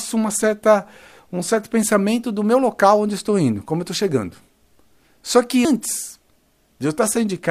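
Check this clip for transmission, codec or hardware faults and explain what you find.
One fault is present. Damaged data in a compressed stream at 5.65 s: corrupt bytes make the decoder lose frame sync and resync, leaving a brief blip in the speech.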